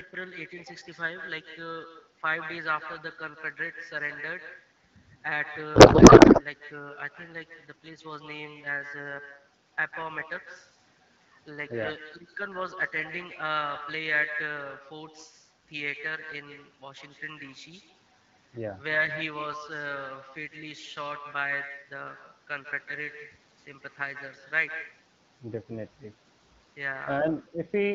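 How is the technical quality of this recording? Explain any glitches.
The recording is compromised by two faults: a constant echo and a brief burst of garbled decoding, heard through an AMR wideband (HD Voice) codec whose light coding softness fits a rate of about 12.65 kbit/s.

Echo with no canceller runs through the whole clip. The far end's loudspeaker feeds its microphone, and nothing removes that signal, so every phrase returns about 9 dB quieter, roughly 150 ms late, and thinner. A spectrogram shows each syllable smeared by a fainter delayed copy.

A codec payload misread occurs from 5.75 to 6.43 s. The decoder reads octet-aligned AMR as though it were bandwidth-efficient, so the frame fields land in the wrong places. Speech becomes warbling, garbled noise that barely follows it. On a spectrogram, the harmonic structure gives way to a blurred, disordered patch.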